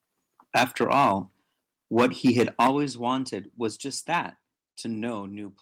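Right from 0.55 to 1.12 s the speech turns harsh and crackly, with peaks pushed about 15 dB past the ceiling and a fair chunk of the waveform flattened. That's microphone overload, likely an input gain set too high, so the converter chops the tops off. At 0.59 s there's a small drop of 2 dB, the microphone volume stepped down, likely the call software reacting to the clipping. The crackle returns from 1.97 to 2.7 s at about 10 dB over. A bigger step of 8 dB comes at 2.67 s, then another of 3 dB at 3.69 s. One brief overload at 4.13 to 4.18 s is only about 2 dB over, with just a touch of clipping.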